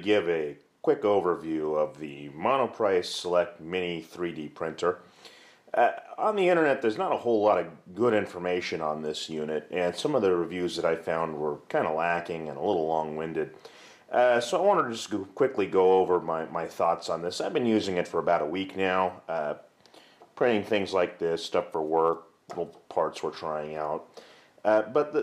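No dropouts, glitches, distortion or other technical faults can be heard anywhere in the recording.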